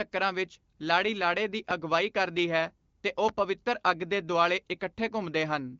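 A loud pop hits this speech clip from 3.29 to 3.41 s, right after "ਕਰਦੀ ਹੈ ਤੇ ਉਹ". It is actually two sharp pops in quick succession, peaking about 10 dB above the speech, while the talking carries on underneath. The cause is likely a sudden voltage step or pulse, from a plug, switch, static discharge or driver glitch, added to the signal and shaped by the circuitry after it. The speech sits in an AMR wideband (HD Voice) codec band with nothing above about 7 kHz.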